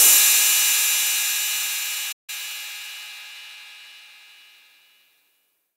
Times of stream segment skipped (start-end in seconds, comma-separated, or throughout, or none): none